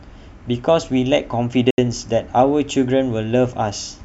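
At 1.71 s the speech drops into a block of digital silence lasting about 74 ms, ending at 1.78 s. The samples are replaced by zeros with no fade, unlike a faded dropout or concealment that smooths the gap.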